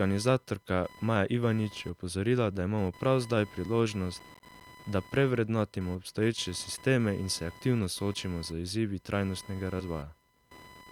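Running under the whole clip is computer activity noise, a buzzing chirp pulsing at around 1 kHz and sitting roughly 25 dB below the speech. The processor, graphics card or mouse draws shifting current through the ground the audio circuit shares, so the noise tracks the computer's activity and not the speech. That is what separates it from hum or hiss.

From 4.20 to 4.63 s, just before "da prevrednotimo", comes processor overload crackle. The processor keeps missing its deadlines for small audio buffers of around 10 ms, something like ten times. Each miss drops in a brief silent gap with hard edges. Together they form a gritty, tearing burst that stops once the load passes, unlike the steady background buzz.

At 9.79 to 9.83 s, compressed frames are skipped. About three whole frames of 20 ms never play, so roughly 70 ms of speech vanishes and the audio jumps ahead.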